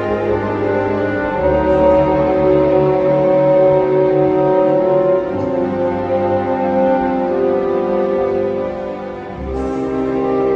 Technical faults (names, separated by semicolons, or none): none